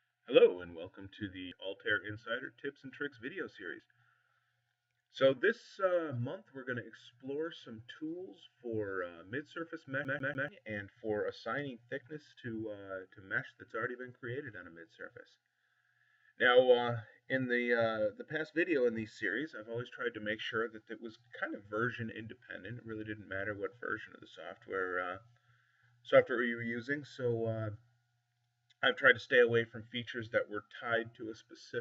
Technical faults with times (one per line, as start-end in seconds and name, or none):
10.04-10.48 CD stuck on one turn